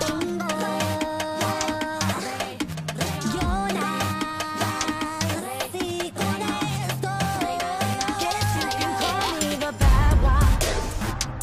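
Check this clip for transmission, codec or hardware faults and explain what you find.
No transmission, codec or hardware faults.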